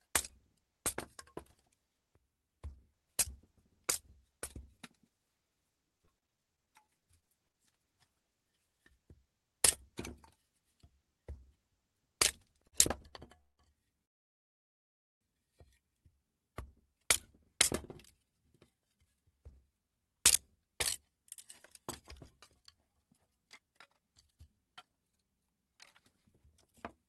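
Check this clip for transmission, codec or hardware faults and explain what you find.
Several transmission faults are audible in this recording of everyday sounds, all from network delivery rather than hardware.

From 5.89 to 7.56 s there is repeated packet loss with a robotic sound. Nineteen short holes, the longest 39 ms, are patched by extending the previous sound, so about a fifth of that stretch is filled-in and choppy.

At 12.68 to 12.75 s and 13.09 to 13.13 s there are short stalls from a late packet. The buffer briefly ran dry, so the sound holds for 50 ms and 26 ms, then resumes without loss.

At 13.40 to 13.61 s and 14.05 to 15.23 s there are call audio freezes, likely from packets held up in transit. The sound drops to silence for about 0.18 s and about 1.2 s, then continues where it stopped.

From 16.81 to 17.74 s (107%) and from 18.15 to 27.03 s (112%) there is jitter buffer speed-up. 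Tiny pitch-period slices are trimmed to shed the built-up delay, roughly a second in total, so events feel hurried at unchanged pitch.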